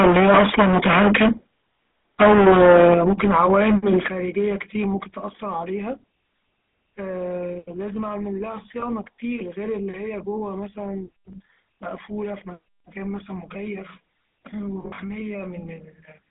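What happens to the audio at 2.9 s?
At 2.94 s the level drops suddenly by about 8 dB, voice and background together, most likely a microphone volume stepped down by the call software's gain control. The whole clip also carries the buzzy, gravelly roughness of the GSM full-rate codec, squeezed into a 200 Hz to 3.5 kHz line band, which fits a 13 kbps coder.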